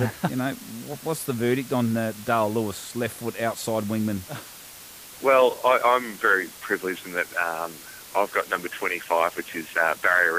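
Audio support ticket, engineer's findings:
Low bit depth with dither throughout: constant even hiss, no distortion, roughly 20 dB below signal. Fits 6-bit quantisation; dither turns rounding error into steady white noise.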